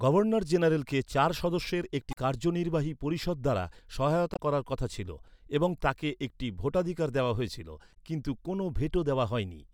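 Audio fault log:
2.10–2.17 s, 4.33–4.39 s and 7.90–7.97 s, damaged data in a compressed stream: three short glitches, each around 60–65 ms, cutting into the speech. In each spot a bit of the compressed stream arrived corrupted, so the decoder misread those frames, lost its footing, and had to hunt for the next valid frame header before it could resume. That garbage decode is the glitch you hear.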